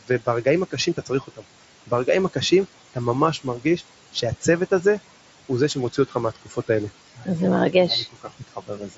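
Noise suppressor artifacts run from start to end: the suppressor pulls down the room noise, which sits about 17 dB below the speech, by about 17 dB frame by frame, so the background sinks in the gaps and swells under the speech.

Speech cut by the noise suppressor occurs at 0.01–1.44 s, 3.38–3.81 s, 4.13–4.85 s, 5.49–6.69 s, 7.16–7.28 s and 8.12–8.97 s. The suppressor mistook soft speech for noise and lowered it by about 13 to 17 dB, most deeply in the first and last spans, so endings and quiet consonants sound swallowed.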